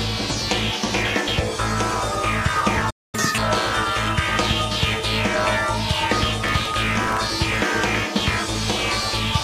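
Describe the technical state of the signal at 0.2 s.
At 0.2 s the signal is intact, with no technical fault audible at that moment.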